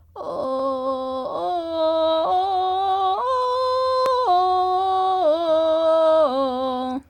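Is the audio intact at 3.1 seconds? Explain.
Yes, at 3.1 seconds the music plays through intact with no audible fault.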